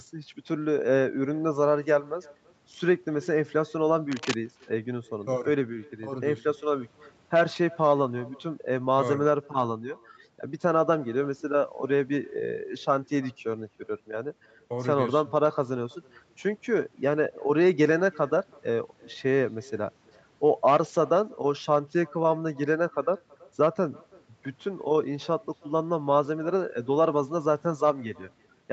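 From start to finish the speech carries an echo with no canceller. The far end's loudspeaker feeds its microphone, and nothing removes the return. A faint, thin copy trails each phrase by about 0.3 s, about 28 dB down.

From 4.12 to 4.37 s, cable scratch noise cuts in. A quarter-second burst of rough, uneven crackle sits fairly loud over the speech. A worn cable or connector being moved likely caused it, with its contact resistance jumping rapidly. The call band stops at 8 kHz throughout.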